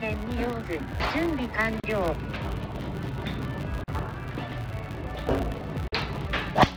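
From start to finish a filter restarted on every block resets its state every 10 ms, so each block opens with a small transient. The result is a 100 Hz buzz that rises and falls with the signal level. On a spectrogram it shows as evenly spaced vertical striations with harmonics at multiples of 100 Hz.

At 1.80 s, 3.84 s and 5.88 s, roughly every 2 s, there is a gap at a join of encoded pieces, lasting about 37 ms, 43 ms and 43 ms. Separately encoded segments were spliced without trimming encoder delay and padding, so continuous sound drops briefly to silence and resumes where it stopped. The waveform shows flat notches with slightly smeared edges.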